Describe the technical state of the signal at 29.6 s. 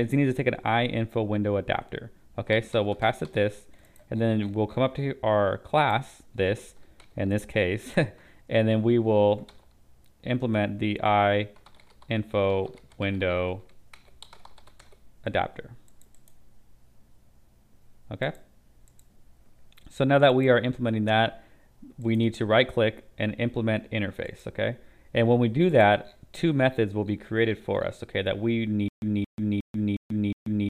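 At 29.6 s the signal is in a stutter with silent gaps, running from 28.88 s to the end. A 0.22 s burst repeats five times, every 0.36 s, with 0.14 s of digital silence between. A stalled stream likely replayed its last fragment on each retry.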